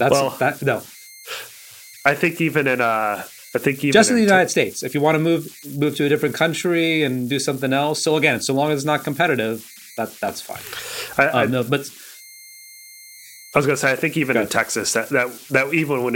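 Converter idle tones run throughout the speech. An undithered delta-sigma converter settles into repeating bit patterns on low-level input, leaving a whistle around 2 kHz in the pauses and grainy noise under quiet passages, roughly 22 dB below the signal.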